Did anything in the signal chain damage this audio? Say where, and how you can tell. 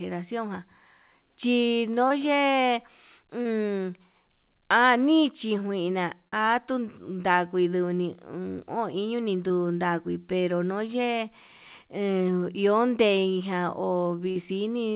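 Yes, network packet loss, smoothed over by concealment: brief smears at 2.08, 3.42, 6.28, 9.48 (just before "ndagui pero"), 10.87 and 14.31 s, where the receiver stretched the last sound over 10 to 40 ms gaps.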